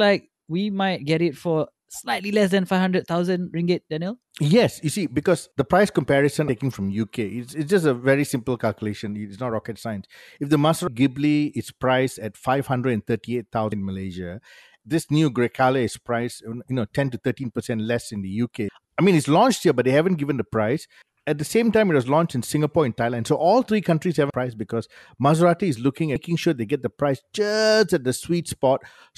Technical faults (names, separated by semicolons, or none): compressed frames skipped